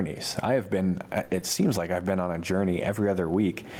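Throughout the speech loudness stays flattened and squashed. This is gain pumping, likely from input gain set far too high with a fast limiter pulling it back by around 20 dB. The room noise sits about 37 dB below the speech.

At 1.23 s, just after "I have been", the last sound is held and fades out for 1.23 to 1.31 s. This burst of packet loss left a hole that the receiver filled by stretching and fading the last audio for about 60 ms, and about 60 ms of real speech is skipped when playback resumes.

From 1.31 to 1.37 s, leading into "seems like I've been", the audio returns but sounds grainy and hissy. This is a lost packet rebuilt from error correction: about 40 ms, which suggests two packets, were decoded from rough low-bitrate backup copies carried in later packets.

At 1.39 to 1.43 s there is a brief smear. This short concealed packet loss had roughly 20 ms missing, which the decoder patched by extending the preceding sound before blending back into the real signal.

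At 2.79 to 2.89 s, right after "I've been on a", the roughness returns. This is again a lost packet rebuilt from error correction, with about 60 ms reconstructed from backup copies, which points to three packets.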